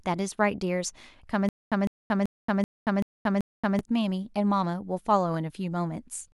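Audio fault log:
1.49–3.79 s, stutter with silent gaps: a 155 ms speech fragment repeats six times every 384 ms, each followed by 228 ms of digital silence. Playback likely stalled and replayed its last fragment at each retry, so the speech from that span is lost.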